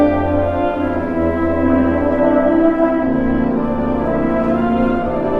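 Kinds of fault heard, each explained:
Adaptive stream at a lower bitrate: from 1.64 s to the end, the sound abruptly takes on stronger codec artefacts, with no gap or dropout at the switch. The stream moved to a lower-quality version after the connection slowed, and the codec had far fewer bits to spend, so it discarded high frequencies and approximated detail. The change fits a step down from around 64 kbit/s to around 16 kbit/s.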